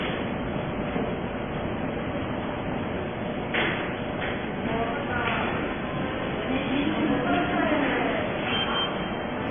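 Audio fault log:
Throughout: transcoding between lossy codecs. Nothing is heard above 3.5 kHz, so the sound is dull and muffled. Two kinds of coding artefact are heard together, one layered over the other. This is likely a very low-rate MP3 later re-encoded as low-rate AAC.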